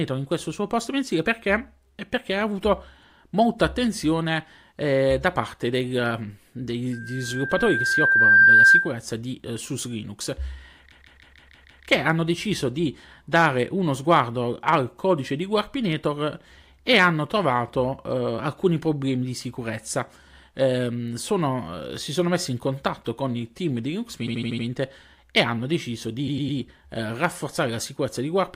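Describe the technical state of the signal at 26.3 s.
Repeated frames from 26.27 to 26.58 s, right after "e hanno deciso": one 104.5 ms block of compressed frames plays three extra times, a stutter that adds 313.5 ms. Unlike an echo, the repeats are identical and don't fade.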